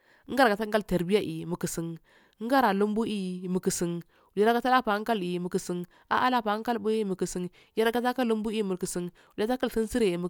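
No technical faults can be heard anywhere in this speech recording; the signal stays continuous and intact throughout.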